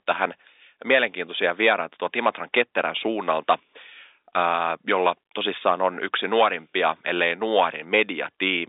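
Nothing's technically wrong here: it's just speech over an ordinary G.711 phone line, with the usual narrow band of about 300 Hz to 3.7 kHz and nothing above roughly 3.8 kHz, exactly as a landline call should sound.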